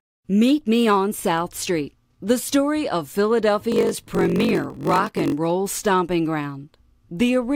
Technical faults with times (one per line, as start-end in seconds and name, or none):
3.70-5.34 block size mismatch (padded)